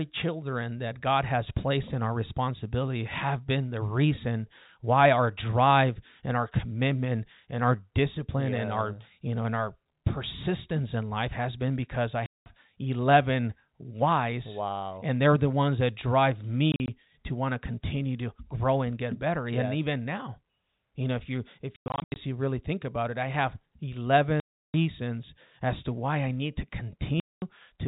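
Lost packets were replaced with silence at 12.26 s after "has been because i", 16.72 s, 21.76 s after "you know if you", 24.4 s and 27.2 s after "why I need to". This packet loss filled with silence leaves hard-edged holes whose lengths fit 20 ms packets.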